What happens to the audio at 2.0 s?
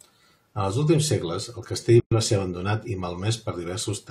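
At 2.0 s the speech drops into a silence of about 115 ms, lasting until 2.12 s. This is a gap at a join of encoded pieces. Two separately encoded segments were spliced untrimmed, so encoder delay and end padding remain. The edges are smeared by the codec, and the sound resumes where it stopped.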